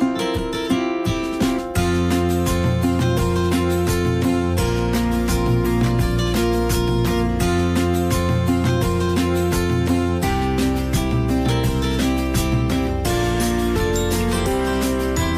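No faults can be heard anywhere in this audio.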